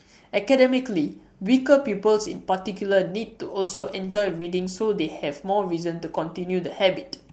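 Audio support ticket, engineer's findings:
Repeated packet loss (robotic sound), 3.61–4.43 s: four dropouts, longest 100 ms, about a third of the span concealed. Jitter buffer/packet loss concealment stretching the last frame across holes, hence the choppy texture. Unlike a single dropout or clipping, the damage recurs within the stretch, with some sound rebuilt (around 150 ms) rather than silent. The band limit near 8 kHz points to the call codec, likely wideband Opus at about 24 kbps.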